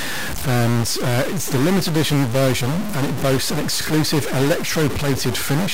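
A stuck bit runs through the whole of this speech clip, from start to finish. The speech is overlaid with a harsh, buzzy distortion that follows the waveform. The pauses never fall silent and instead carry a steady noise floor. That pattern likely comes from one data bit held at a fixed value by a faulty line or converter. Roughly half the samples are then pushed off by a step of around -20 dBFS, and the error flips with the sign of quiet signals.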